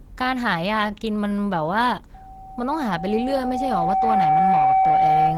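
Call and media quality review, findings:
Speech throughout: grainy, rough texture with a hoarse edge, plainly audible, while the top end stays open to about 20 kHz. Likely Opus compression, which fits a low bitrate around 16 kbps in hybrid mode. Band-filled noise, not MP3-style swirl.

Loudspeaker feedback squeal from 2.14 s to end: single steady tone at 765 Hz, swelling over roughly two seconds to about 5 dB above the speech. Mic-to-speaker loop gain exceeding one at that frequency. Fixed pitch and self-sustaining growth distinguish it from codec tonal artefacts.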